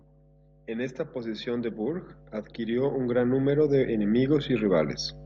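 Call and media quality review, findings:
Mains hum, whole clip: steady 50 Hz tone with low harmonics under the speech, fairly strong at roughly 15 dB below it. Probable ground loop or transformer coupling in the capture chain or cabling, putting the power-line frequency into the signal.

Automatic gain rising, 0.67 to 4.07 s: speech and hum swell together by about 13 dB over roughly 3.4 s. AGC judged the input too quiet and raised gain gradually, lifting the hum along with everything else.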